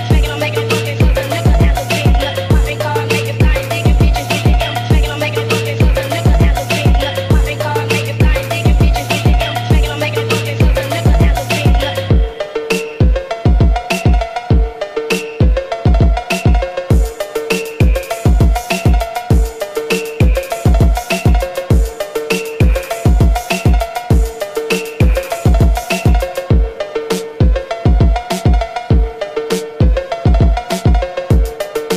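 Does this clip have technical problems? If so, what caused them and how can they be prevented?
No technical problems are audible.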